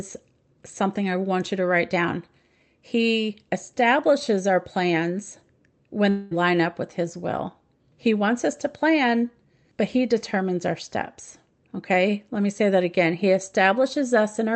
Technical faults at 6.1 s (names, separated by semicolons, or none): long network dropout